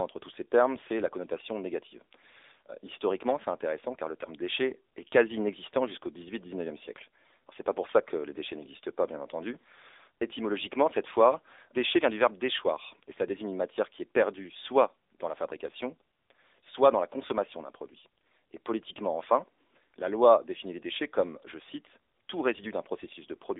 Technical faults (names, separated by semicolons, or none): AMR narrowband mobile codec